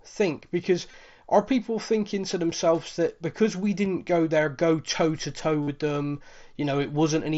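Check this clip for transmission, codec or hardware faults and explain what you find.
Three brief dropouts are concealed Bluetooth headset packet loss. Just after "think because", at 0.91 to 0.94 s, the gap is a short run of lost packets, and after "themselves that because we" at 3.85 s, the single-packet gap is nearly hidden. After "go toe to toe", at 5.62 to 5.68 s, a buzzy tone holds at full level for about 52 ms and warbles as real speech returns. The headset link dropped voice packets, and the phone filled each gap by repeating the best-matching recent stretch of waveform. The lengths point to roughly three, one and seven lost packets. Underneath, the wideband mSBC headset codec adds a light grain on loud sounds and limits speech to 8 kHz.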